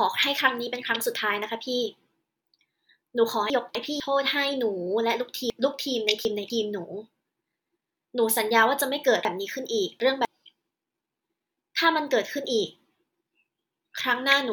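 Chunks out of order: 250 ms blocks played late at 3.5–4.0, 5.5–6.5 and 9.25–10.25 s, briefly jumbling the speech.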